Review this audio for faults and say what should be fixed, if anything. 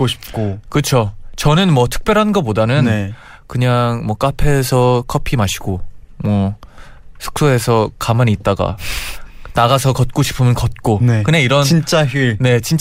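Nothing here needs fixing, since no faults turn up anywhere in this speech recording.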